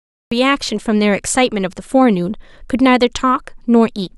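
From 0 to about 0.32 s there is dead digital silence, then the speech enters abruptly mid-sound. This is a cut-off start: capture began late, so the opening has no natural onset. Unlike a fade-in, the level jumps straight from nothing to full.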